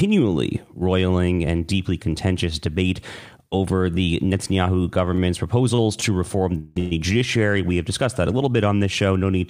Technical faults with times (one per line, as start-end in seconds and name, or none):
5.16-5.19 short stall from a late packet
5.75-6.03 short stall from a late packet
6.58-6.92 call audio freeze